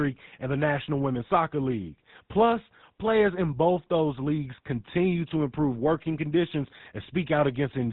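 From start to finish the speech carries the GSM full-rate codec's plainly audible buzzy, gravelly roughness, with nothing above 4 kHz, which fits a 13 kbps GSM channel. The vocal-tract model is driven by sparse regular pulses, so unlike simple band-limiting, the voice itself turns rasping.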